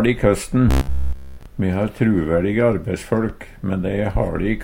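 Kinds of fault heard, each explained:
Robotic sound from repeated short buffers: from 0.71 to 1.46 s the sound becomes a rigid, metallic buzz at 66.7 Hz, which fits a 15 ms stretch being replayed throughout, likely because new audio arrived too seldom and the real signal was skipped.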